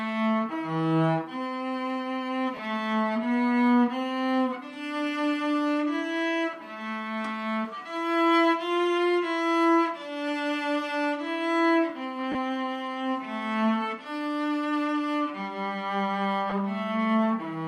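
Lost LE Audio frames break the sound at 2.57–2.59 s, 12.32–12.35 s and 16.50–16.53 s. Each is a brief noisy smear of about 20 to 30 ms, consistent with two or three dropped 10 ms frames that the LC3 decoder filled by repeating the last spectrum with randomised phase.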